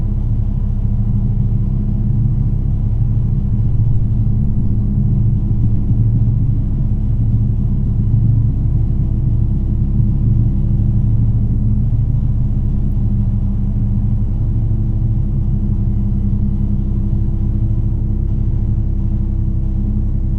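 From 18.28 s to the end, the treble dulls and a gritty, grainy noise rises. This is a Bluetooth SBC bit pool drop: the sender, struggling with a congested link, roughly halved the bit pool, which points to a fall from 28 to 14, near 108 kbps.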